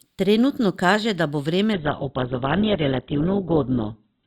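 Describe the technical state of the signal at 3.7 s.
At 3.7 s the signal is in an adaptive stream at a lower bitrate, a drop that begins abruptly at 1.73 s, right after "kaže da bo," and lasts to the end. The stream switched to a leaner encoding without a gap. Nothing remains above 4.2 kHz, and codec artefacts increase. The sound points to a fall from about 64 kbit/s Opus to about 8 kbit/s.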